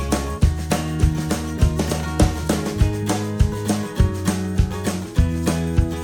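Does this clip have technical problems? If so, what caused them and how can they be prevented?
No, this music clip has no technical problems.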